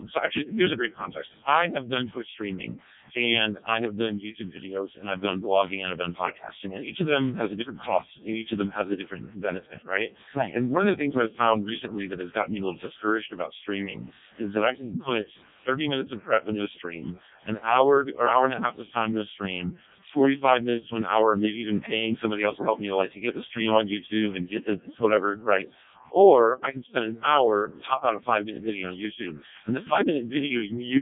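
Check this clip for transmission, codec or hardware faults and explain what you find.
One fault runs through the whole recording: the speech has passed through a Codec 2 vocoder. Only pitch, voicing, energy and a coarse spectral outline are carried, and the decoder rebuilds the voice from sine waves, discarding the original waveform. The heavy damage fits the 0.7 kbit/s mode. The result is robotic and buzzy throughout, with nothing above 3.8 kHz.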